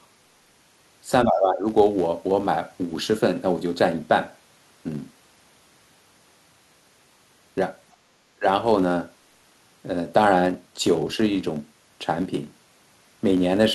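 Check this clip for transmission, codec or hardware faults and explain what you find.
Three faults are present: a constant buzz, and brief echo-canceller trouble near 1.3, 7.9 and 8.4 seconds.

Throughout the clip, a filter restarted on every block begins each block from silence, which fits a 256-sample block. The resulting transients form a 172 Hz buzz that follows the speech level.

From 1.25 to 1.66 s and from 8.36 to 8.46 s, the speech dips by about 15 dB and about 20 dB. This is likely speech suppressed in double talk by the echo canceller.

From 7.92 to 7.96 s, a faint scrap of a second voice sits about 40 dB below the speech. This is likely the other side's voice leaking through the echo canceller.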